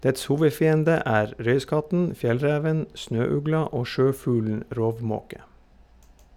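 No technical faults can be heard anywhere in the recording.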